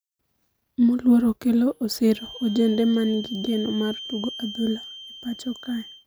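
A loudspeaker-to-microphone loop is likely sitting right at the edge of instability from 2.04 s to the end, so a feedback whistle near 3.1 kHz rings on without building. It sits about 15 dB under the speech as a thin, steady tone swelling and fading slowly in level.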